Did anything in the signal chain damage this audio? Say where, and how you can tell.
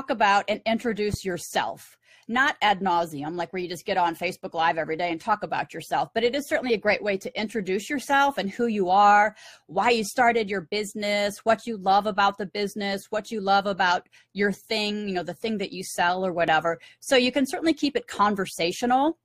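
Yes. Two loud pops, at 1.14–1.16 s and 16.48–16.50 s, the first roughly 10 dB over the signal, the second smaller. Each is one brief pulse riding over continuing sound, not a gap like a dropout. A voltage step in the analogue wiring is the likely cause.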